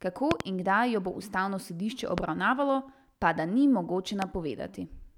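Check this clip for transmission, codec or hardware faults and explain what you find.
The clip has three loud pops. A voltage step, likely from a plug, switch or static discharge, entered the signal chain. Each one sits about 20 dB above the speech, which carries on underneath. A double pop falls at 0.31–0.43 s, just before "in kdaj jo bo". Single pops fall at 2.18–2.20 s, between "jo bo ustavno sodišče" and "obravnavalo pa da ni", and at 4.22–4.24 s, right after "obravnavalo pa da ni".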